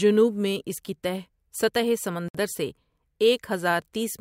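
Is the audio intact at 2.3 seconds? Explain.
No. At 2.28 to 2.35 s there is a gap at a join of encoded pieces. The speech was encoded in separate sections that were then butted together without trimming, so the encoder's start-up delay and the padding on the final frame of the earlier section both stayed in. The result is a silence of about 61 ms cut abruptly into continuous speech, its edges smeared by the codec. The speech then resumes exactly where it left off.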